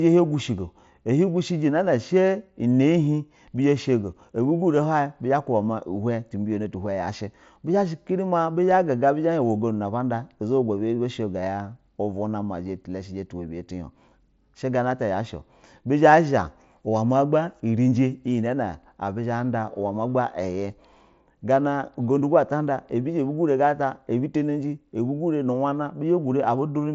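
No faults are present: the speech comes over a Bluetooth mSBC headset codec link that is working as designed, with the band stopping near 7.7 kHz and only the light coding grain that wideband headset audio carries.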